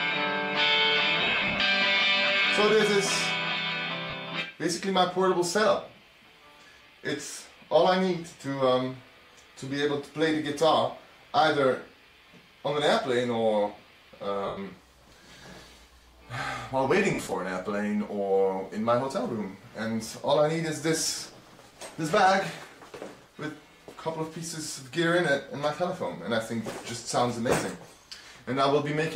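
There are lost LE Audio frames at 1.22–1.60 s (about 240 ms missing in short bursts), 4.10–4.13 s, 14.46–14.58 s and 17.14–17.32 s. Each time, the decoder fills the gap by recycling the last spectrum with scrambled phase, so tones smear into hiss. The longer gaps start to fade toward silence, all over the light codec compression.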